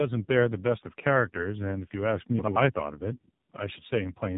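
Speech that has been through tandem speech coding for its whole length: two low-rate speech codecs in a row, with a G.711 leg between them. The sound fits iLBC followed by AMR-NB. Each coder re-encodes the previous one's artefacts, so the result is rough, muffled and warbly, and nothing is heard above 3.8 kHz. From 2.39 to 2.56 s there are chunks out of order: one 85.33 ms chunk plays a chunk late, after the one that should follow it. That produces a brief jumbled stretch with hard joins, though no audio is missing.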